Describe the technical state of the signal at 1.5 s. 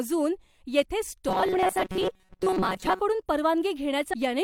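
At 1.5 s the speech sits inside a stretch of robotic sound from repeated short buffers, running from 1.29 to 3.00 s. The audio turns into a hard, metallic buzz at 188 Hz that only loosely tracks the speech. That pitch fits a loop of about 5.3 ms, likely from the playback side running short of fresh data and replaying its last tiny block while real audio is dropped, for most of the span. A spectrogram would show rigid, evenly spaced horizontal harmonics at multiples of 188 Hz replacing the natural harmonic pattern, and the waveform would show a short cycle copied over and over.

On top of that, between 1.49 and 1.55 s, there is damaged data in a compressed stream. The decoder hits corrupted frames, loses its place and hunts for the next valid frame header, so a brief glitch cuts through the buzz. On a spectrogram this appears as a short vertical smear of broadband or oddly shaped energy that breaks the harmonic lines. 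The waveform would show an abrupt discontinuity or a garbled burst about 60 ms wide.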